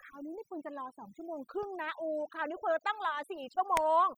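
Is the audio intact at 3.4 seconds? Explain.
No, at 3.4 seconds the speech is still caught in the overdone noise removal that runs through the whole clip. The noise reduction was pushed too hard, so every frequency band sitting close to its noise estimate gets cut deep or switched off, and the quieter parts of the voice go along with it. That's why the background collapses into near silence with little twinkling specks.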